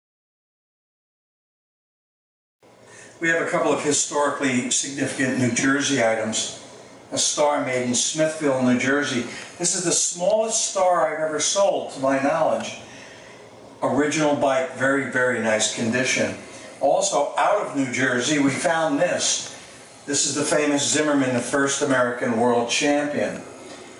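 Gain pumping runs throughout: the gain ducks under loud sounds by roughly 15 dB, likely from excessive input gain driving a fast limiter. The waveform looks flattened.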